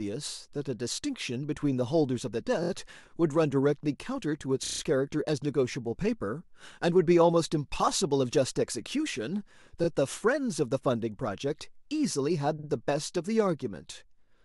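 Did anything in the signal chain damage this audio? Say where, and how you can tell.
Yes. The damage is at the codec or storage stage: repeated frames. A short block of compressed audio plays again one or more times in a row at 2.62–2.69 s, 4.64–4.80 s, 9.83–9.86 s and 12.58–12.67 s. The repeating unit is about 22–23 ms, or about 46 ms at 12.58 s, which fits whole codec frames rather than arbitrary samples. What sets this apart from a buffer dropout is that nothing is lost. The sound stutters and the timeline stretches by roughly 30 to 160 ms at each spot.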